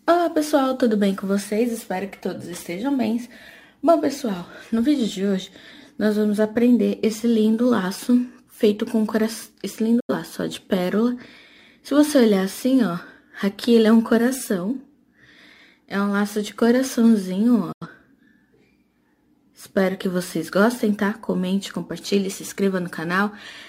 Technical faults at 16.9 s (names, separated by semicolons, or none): none